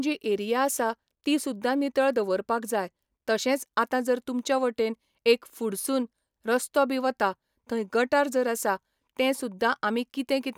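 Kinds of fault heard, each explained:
No technical faults are audible.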